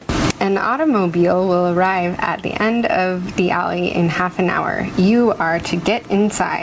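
Gain pumping runs through the whole speech clip. The input gain was likely set far too high, so a fast compressor or limiter pulls the level down on every loud syllable. The gain swings by around 15 dB, and the speech sounds squashed and flat in level. The audio tops out at 8 kHz, which fits a G.722 call codec.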